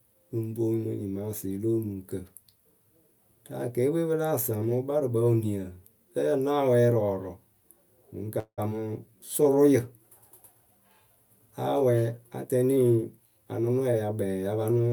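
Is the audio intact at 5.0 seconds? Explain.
Yes, the speech at 5.0 seconds is intact, with no audible fault at that moment.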